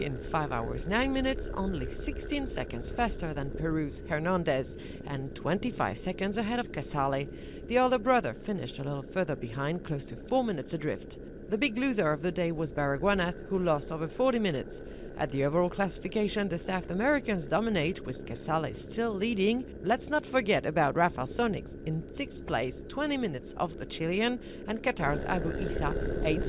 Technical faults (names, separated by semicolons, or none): none